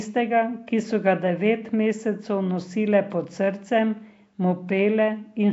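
Speech carrying Nellymoser-style compression damage throughout, likely from the Flash-era Nellymoser Asao codec at a rate fitting 32 kbps: a rough, hissy, underwater smear, with a spectrogram showing blocky noise-filled bands and nothing above 7.7 kHz.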